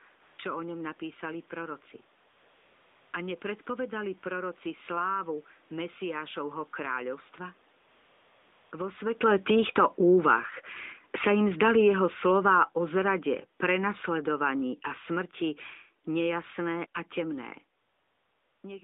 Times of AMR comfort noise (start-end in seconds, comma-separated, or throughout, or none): 0.22-0.38, 2.30-3.12, 7.82-8.72, 17.80-18.64